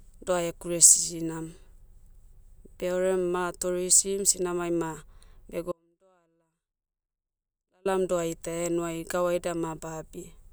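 From 5.72 s to 7.85 s the signal feeding the path was lost while the chain after the break stayed live, most likely an interrupted connection upstream, giving an audio dropout to a faint residue. The speech cuts out abruptly mid-flow and, for about 2.13 s, only faint sound remains, roughly 40 dB below the normal speech level, before it snaps back in. Unlike a natural pause, the onset and return are sudden.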